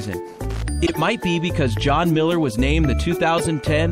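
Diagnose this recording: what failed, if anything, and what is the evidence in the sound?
Throughout, the sound has a plainly audible watery, swirly texture with the top end cut off and weak detail flickering in and out. This is likely MP3 compression at a low bitrate, around 64 kbps, where the encoder drops high frequencies and zeroes quiet spectral lines frame by frame.

From 0.34 to 0.62 s there is an irregular burst of scratchy crackle, a loose connector crackle in the analogue wiring. A worn or dirty contact was making and breaking, chopping the signal.

Two short bursts of misplaced energy, heard as chirpy blips, mark a corrupt frame decoded at the codec or storage stage. The first runs 0.86 to 0.99 s and peaks around -10 dBFS. The second runs 3.38 to 3.47 s and is louder, near -5 dBFS. In each, a handful of damaged frames were played with wrong gains or misread codes.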